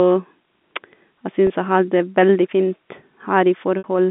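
At 1.47 s, just before "jeg har det veldig", the speech briefly holds on a slightly buzzy, frozen tone for about 30 ms, and at 3.78 s a longer 60 ms hold drifts toward silence before the speech returns through a short cross-fade. Both are packet loss with pitch repetition: the receiver bridged the missing audio by repeating the last pitch period and fading it out, the first gap fitting a single lost packet and the second about two.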